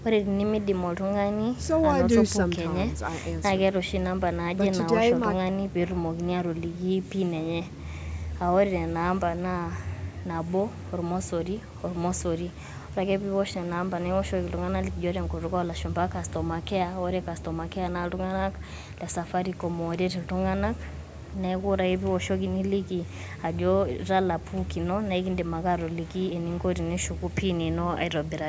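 No technical faults can be heard in this speech; it has the expected sound of call microphone processing, with the lowest bass trimmed and nothing above 8 kHz.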